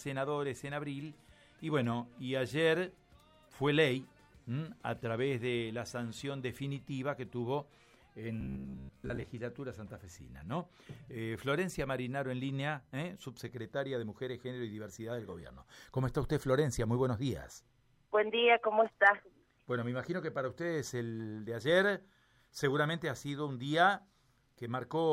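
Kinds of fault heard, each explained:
Robotic sound from repeated short buffers: from 8.41 to 9.25 s the sound turns into a rigid, metallic buzz at 66.7 Hz, likely because new audio arrived too seldom and a segment of about 15 ms was looped to fill the gaps, skipping most of the real material. A waveform shows near-identical cycles repeating every 15 ms. A spectrogram shows evenly spaced harmonics of 66.7 Hz in place of the natural detail.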